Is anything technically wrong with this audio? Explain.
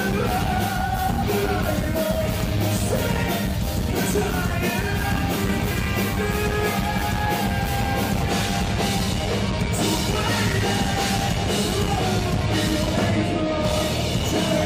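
Yes. At 2.40 s there is an overlap between stream segments. Two segments, about 4 s long, claim the same stretch of time. The player trims the overlap, so a few milliseconds of sound disappear. The waveform jumps, giving a brief click or skip.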